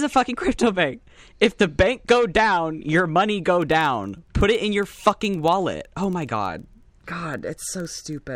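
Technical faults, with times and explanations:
3.62 to 8.35 s, filter restarted on every block: each block starts cold with a tiny click, making a 21.5 Hz buzz that tracks the speech level, which fits a 2048-sample block.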